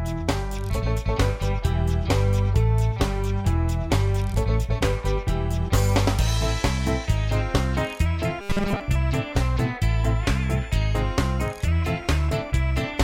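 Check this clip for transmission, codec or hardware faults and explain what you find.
One fault appears: robotic sound from repeated short buffers, from 8.40 to 8.81 s. The audio hardens into a rigid, metallic buzz at 200 Hz, likely because playback ran short of data and kept looping its last 5 ms chunk, skipping most of the real sound. A spectrogram shows flat, evenly spaced harmonics at multiples of 200 Hz, and the waveform repeats one identical short cycle.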